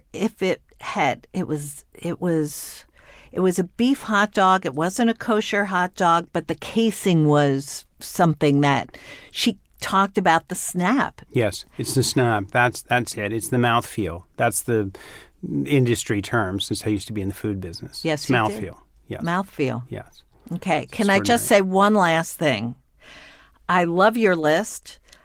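There's nothing wrong to point out in this speech recording, and the Opus voice compression it passes through leaves only a light mark on the sound.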